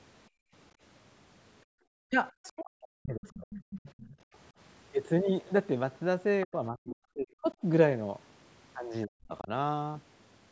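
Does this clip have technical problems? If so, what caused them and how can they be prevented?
Yes. Background gated by the echo canceller: the room tone, not the voice, drops out at 0.29–0.53 s, 1.65–1.8 s and 4.18–4.31 s, by about 32 to 39 dB, while the loudspeaker plays.

Speech suppressed in double talk: the talker's own voice dips deeply, by around 35 to 40 dB, at 2.08–2.22 s, 2.41–3.51 s, 6.46–7.62 s and 9.06–9.5 s, likely because the canceller confuses overlapping speech with echo.

Other side's voice leaking through: a second, quieter voice, well below the talker's level, is heard at 3.53–4.16 s, likely residual echo the canceller missed rather than a level dip.

A headset, or a better-tuned echo canceller with proper double-talk detection, would prevent all three.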